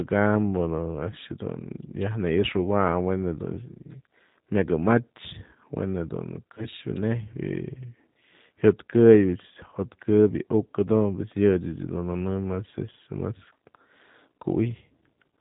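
Throughout, the speech has passed through the G.729 codec at 8 kbit/s, which models each 10 ms frame as a vocal tract filter and pitch predictor driven by a handful of pulses, and discards everything above 4 kHz. The damage is plainly audible: the speech stays intelligible but sounds dull, slightly rough and synthetic, with the airy upper range missing.

At 6.55 s, about 20 ms of the stream went missing, which points to a single lost packet, and the decoder filled the gap with VoIP packet loss concealment by extending its last pitch and filter settings at falling gain. From 6.55 to 6.67 s the sound smears into a short buzzy tone or coloured noise that fades. Because each frame builds on the previous one, the speech stays weakened or distorted after the gap itself, until the decoder recovers.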